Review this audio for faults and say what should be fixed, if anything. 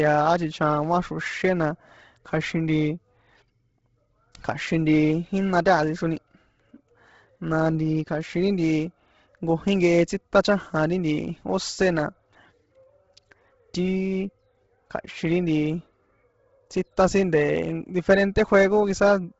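Throughout the speech, from start to finish, there is heavy codec damage. Nothing is present above 7.7 kHz. The upper band that remains sounds breathy and grainy, as if it were partly filled with noise. The likely cause is Bluetooth LC3 compression. LC3 works on short frames, which here fits 10 ms. When its bitrate is low, around 16 kbps here, it discards most high-frequency detail and substitutes noise. To prevent it, record over a wired link or configure LE Audio for a higher LC3 bitrate.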